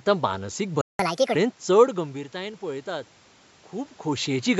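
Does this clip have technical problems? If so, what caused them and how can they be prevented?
Yes. A playback stall runs from 0.81 to 0.99 s: the speech stops dead in mid-flow for about 180 ms, then resumes. The likely cause is the player running dry, its buffer emptied by late-arriving data or its audio thread briefly blocked, so it had nothing to send to the output until data came through again. This can be prevented by keeping a deeper jitter buffer and running the audio thread at high priority so other work cannot block it.

Catch-up at higher speed follows immediately, from 0.99 to 1.35 s. The speech runs at 1.5 times normal speed and its pitch jumps by roughly seven semitones, giving a brief chipmunk quality before dropping back. After the gap, the player works off its backlog by resampling it faster, which raises tempo and pitch together until the lost time is recovered. This can be prevented by catching up gradually with a pitch-preserving time-stretch, or by discarding the backlog.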